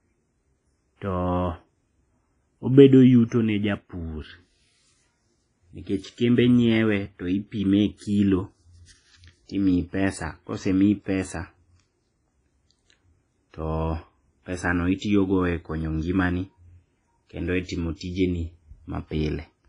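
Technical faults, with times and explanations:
Throughout, WMA compression: a transform encoder starved of bits, likely WMA at a rate consistent with 24 kbps, quantises the speech coarsely and zeroes weak spectral lines, so nothing remains above 10.4 kHz and the sound rings and smears, with hiss breathing alongside it.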